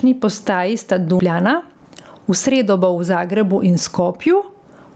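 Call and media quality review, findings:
Call and media quality review, findings:

Gain pumping, throughout: gain swing of roughly 15 dB. Loud and soft parts are squashed together. Likely cause: mic input gain far too high, with a fast limiter/compressor clamping every peak.

Skip ahead, at 1.2 s, right after "postaji sta": roughly 0.7 s of speech missing, both sides butted together with no fill. A stretch was dropped in transit or by an overflowing jitter buffer, cutting playout delay by about 0.7 s.

Jitter buffer speed-up, 1.29–2.85 s, ending just before "bo v": speech runs at about 110% speed, pitch unchanged, sounds hurried. The receiver repeatedly removed short pitch-period pieces, about 150 ms in total, to drain excess buffered audio. The call went through the Opus call path, with nothing above 8 kHz.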